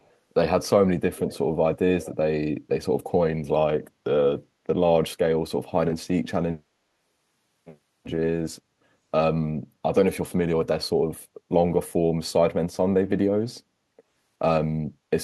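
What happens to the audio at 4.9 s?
Nothing goes wrong at 4.9 s; the speech runs through that moment intact, with no dropout, click or distortion.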